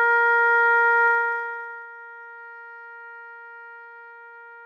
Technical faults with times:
1.06-1.88 zipper noise

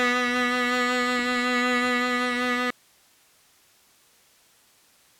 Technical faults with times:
2.70-5.20 audio dropout to a faint residue

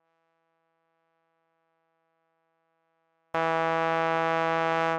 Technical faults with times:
0.00-3.34 24-bit alignment error (too quiet)

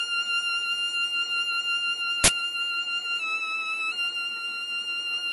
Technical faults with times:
0.00-5.33 transcoding between lossy codecs
2.24-2.28 uninitialised buffer
3.20-3.92 drift correction step

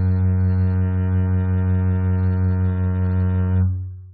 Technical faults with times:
none

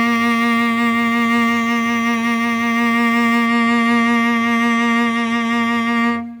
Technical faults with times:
0.00-3.47 sample clock jitter

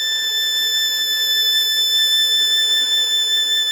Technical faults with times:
none

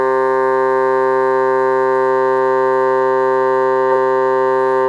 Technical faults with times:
none

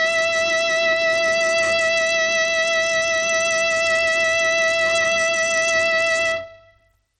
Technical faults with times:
0.00-7.19 Bluetooth SBC compression

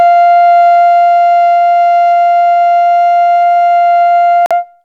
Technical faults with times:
4.46-4.52 Bluetooth dropout

